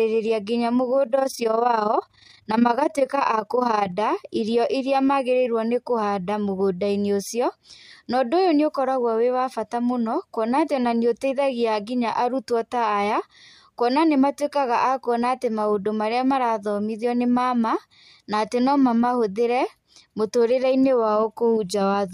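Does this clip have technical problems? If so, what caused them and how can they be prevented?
Yes. From 1.04 to 3.93 s the speech carries overlap-add ripple, a rough flutter that ends just before "irĩo ĩrĩa magĩrĩirwo nĩkũhanda". The audio was split into windowed frames and rejoined with an overlap at which the windows do not add up to a constant gain, so the level dips by about 11 dB once per frame, around 30 times a second. To prevent it, pair the window shape with a hop size that meets the constant-overlap-add condition, or normalise by the summed window.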